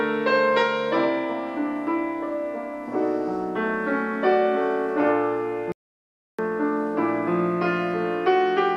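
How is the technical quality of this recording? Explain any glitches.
There's one glitch worth flagging: an audio dropout to silence from 5.72 to 6.39 s. For about 0.67 s the sound simply vanishes into silence, with no room tone underneath, then cuts back in mid-flow. Most likely the input was briefly lost, a loose connection or momentary mute, while recording carried on, so whatever happened in that gap is gone.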